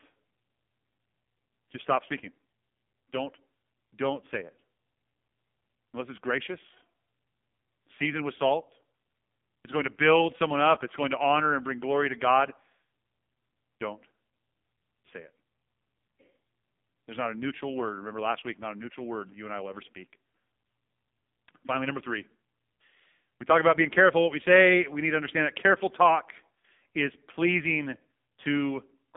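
From start to finish the speech carries the signature of the AMR narrowband mobile codec, heavily degraded. A hard ceiling sits near 3.7 kHz, with the line band running roughly from 200 Hz to 3.6 kHz, so sibilants and lows both vanish. The buzzy, synthetic quality fits one of AMR-NB's lowest modes, around 5.9 kbps. On a spectrogram, energy stops abruptly at that ceiling, leaving the upper region black for the whole clip.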